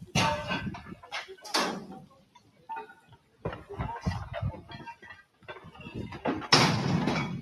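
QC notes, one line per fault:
Throughout: noise suppressor applied to music or sounds. Level swings by roughly 15 dB as sustained parts and tails sink while onsets pass, so the sound pumps and thins. A speech-tuned suppressor is treating steady, non-speech content as background noise and pulling it down.
0.9–1.09 s, 2.0–2.69 s, 2.91–3.45 s, 4.95–5.49 s: sound cut by the noise suppressor. Held material dips sharply, by about 8 dB at 0.9 s and about 13 to 14 dB in the later spans, with decays clipped short. The suppressor judged these stretches as noise and attenuated them hardest.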